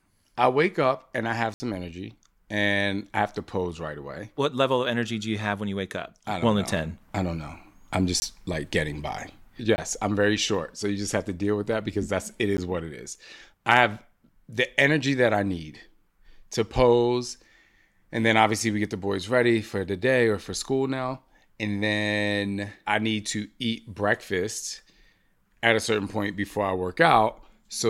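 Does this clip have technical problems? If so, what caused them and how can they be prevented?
Yes. Blocks of digital silence occur at 1.54–1.60 s (60 ms), 8.20–8.22 s, 9.76–9.78 s (20 ms each) and 12.57 s. Each drops abruptly to silence. Keep output buffers filled on time, with larger buffers or higher processing priority.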